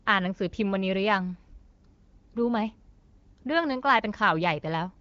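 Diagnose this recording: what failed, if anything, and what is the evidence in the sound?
Nothing failed in this recording, and the sound gives no evidence of any fault.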